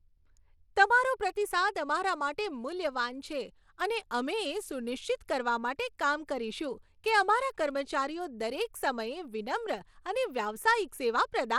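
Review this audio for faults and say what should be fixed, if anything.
Throughout the speech, gritty quantisation noise and flickering treble point to likely Bluetooth SBC compression, consistent with a starved bit pool near 96 kbps. Unlike MP3 smearing, the top sub-bands sputter in and out. Prevent it by recording over a wired path, or raising the SBC bit pool.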